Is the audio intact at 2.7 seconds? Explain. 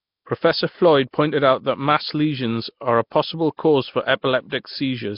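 No. At 2.7 seconds the speech carries the same damage heard across the whole clip, and the likely cause is Nellymoser compression. Nothing sounds above about 5.3 kHz. The speech has a coarse, hissy fringe and a smeared, watery character. The codec splits sound into short blocks and spends very few bits on each. Quiet bands lose their detail and are replaced with noise. The heavy damage fits a bitrate around 22 kbps.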